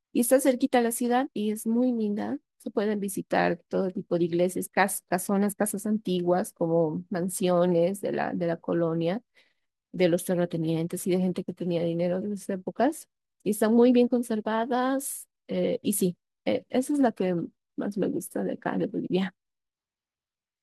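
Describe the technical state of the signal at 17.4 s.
At 17.4 s the signal is intact, with no fault to be heard at that point in the speech.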